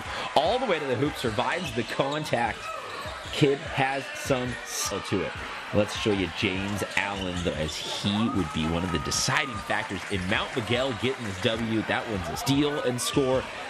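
Damaged data in a compressed stream at 4.90 s and 12.40 s: corrupted bytes make the decoder misread frames and resync, producing a brief chirp, squawk, click or short hole in the sound.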